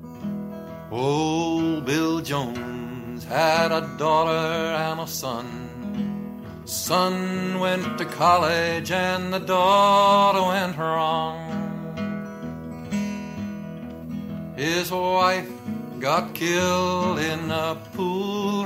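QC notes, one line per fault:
No faults found in this clip. Nothing in the audio calls for a QC entry.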